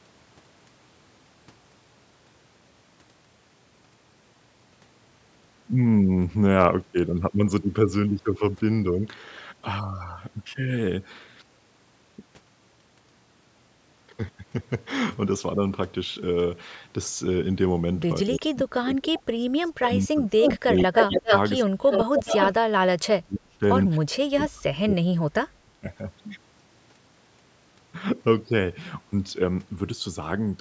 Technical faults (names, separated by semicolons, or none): speech suppressed in double talk; echo leak